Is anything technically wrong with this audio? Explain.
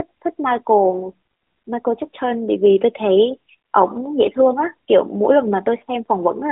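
Yes. Between about 0.90 and 1.02 s the speech briefly dips and warbles, a sign of lost AMR speech frames. A radio error made a frame fail its checksum, and the decoder covered the gap by reusing the previous frame's pitch and vocal tract settings at reduced gain. The disturbance fits a single lost 20 ms frame and recovers with a moment of weakness. Unlike a hard dropout, there is no silent hole or click, just a smeared, synthetic stand-in within the narrowband mobile sound.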